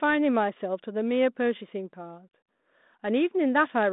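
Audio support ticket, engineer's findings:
No audible faults found.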